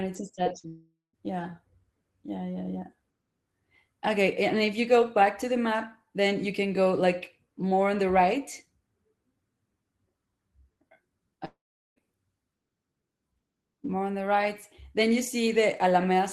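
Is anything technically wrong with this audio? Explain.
Yes. The speech has two kinds of transmission fault.

Short concealed packet loss occurs at 0.35–0.39 s, 0.43–0.48 s and 0.60–0.66 s, with 20, 20 and 40 ms of audio missing. The receiver patched each gap by extending the preceding sound, heard as a quick smear or wobble. The audio resumes almost immediately, which sets these apart from the longer gaps.

A long network dropout is the likely cause of the gaps at 0.68–1.15 s and 11.45–11.98 s, where about 0.46 s and 0.52 s of audio are lost. Each begins with a fading buzz or hiss, then goes silent for about 0.17 s and 0.41 s before the speech returns with that portion missing.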